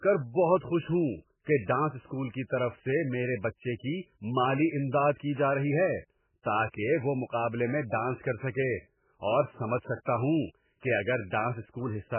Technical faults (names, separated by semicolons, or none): MP3 compression